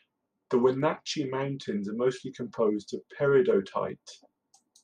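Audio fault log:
2.78 s and 3.90 s: two single sharp clicks, each a thin vertical line across the spectrum. These are likely dropped samples, with a couple of samples missing at each point, so the waveform jumps abruptly to a later value and produces a brief broadband transient.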